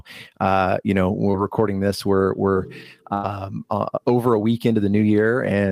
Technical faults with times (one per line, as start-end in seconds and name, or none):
1.31-1.35 short concealed packet loss
3.13-3.25 burst of packet loss